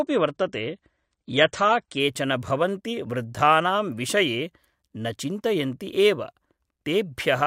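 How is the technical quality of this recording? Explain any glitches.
The first two seconds of this speech are degraded. From 0.0 to 2.0 s the adaptive stream starts at a low bitrate: nothing above 9 kHz and stronger codec artefacts, fitting roughly 32 kbit/s AAC. Quality then jumps up just before "भवन्ति वृद्धानां विषये" with no gap or stall, unlike a rebuffer.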